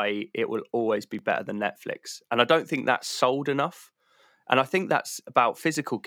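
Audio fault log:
1.19–5.75 s, clock drift buffer slips: about four regular clicks, 1.52 s apart, during the speech. They likely come from two mismatched clocks, roughly 0.1% apart, dropping or repeating some 70 samples. Each slip shows as a thin vertical broadband line on a spectrogram and a waveform jump.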